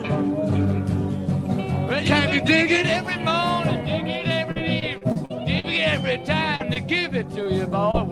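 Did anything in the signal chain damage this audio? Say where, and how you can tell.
Yes. The network stage dropped packets repeatedly from 4.51 to 5.66 s: seven gaps, the longest 43 ms, with about a fifth of that stretch rebuilt by concealment. This repeated packet loss makes the sound choppy and robotic, with extended fragments standing in for missing pieces.

Isolated short concealed packet loss follows at 6.56 to 6.62 s (about 40 ms), 6.74 to 6.77 s, 7.43 to 7.47 s and 7.91 to 7.95 s (about 20 ms each). The decoder extrapolated each hole from the preceding sound, so each one is heard as a brief smear or wobble.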